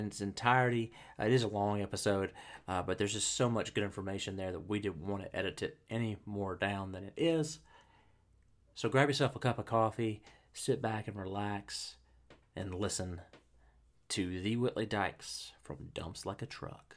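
No technical faults can be heard anywhere in this recording.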